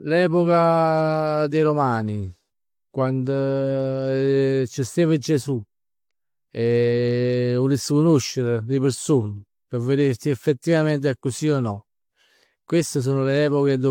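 Speech with generation loss throughout. The sound is swirly, smeared and hollow, and consonant attacks blur. Nothing is present above 19.1 kHz. The cause is likely repeated lossy re-encoding, about four passes, which fits an AAC-LC chain near 96 kbit/s.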